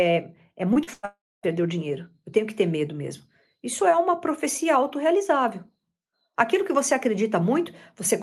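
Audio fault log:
0.73–0.77 s and 0.83–0.89 s, short concealed packet loss: about 20 ms and then about 40 ms of the speech never reached the decoder in time. The receiver bridged each gap by extending the preceding sound, pitched if voiced, noise-like if not, then crossfaded back. The result is a quick smear or wobble. On a spectrogram, the content runs unnaturally flat and steady for those few hundredths of a second.
0.93–1.05 s, burst of packet loss: roughly 100 ms went missing at once. Concealment carried the last sound forward and attenuated it as the gap lengthened, so it comes across as a held, dimming buzz or hiss. The speech then resumes further along, with the intervening material gone. A spectrogram shows frozen, repeated bands whose energy fades toward the right edge. In the waveform, the amplitude envelope tapers smoothly instead of following natural syllable shapes.
1.05–1.45 s, long network dropout: about 380 ms of audio never arrived, likely because the network connection stalled. 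The fill first continues the earlier sound as a fading buzz or hiss. That gives way to about 250 ms of silence before the speech returns, partway into what followed. The waveform shows a decaying tail, then a flat near-zero stretch. On the spectrogram this is a blank vertical gap, bounded by the same roughly 12 kHz ceiling that runs through the rest of the clip, which fits Opus coding at about 32 kbps.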